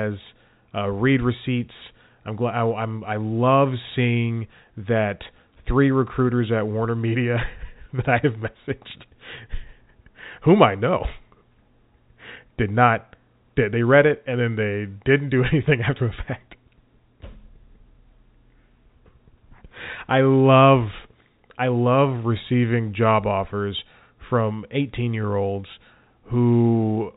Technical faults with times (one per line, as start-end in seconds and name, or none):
none